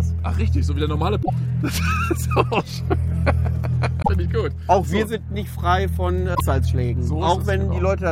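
At 1.19 s the sound breaks into a short chirp, squawk or click lasting until 1.30 s. The same fault returns from 3.99 to 4.09 s and from 6.31 to 6.41 s, each about a tenth of a second. All three are damaged data in a compressed stream. Bytes in those stretches are wrong. The decoder misreads the frames, loses sync and hunts for the next valid frame header. That garbled output is heard as a brief chirp or blip.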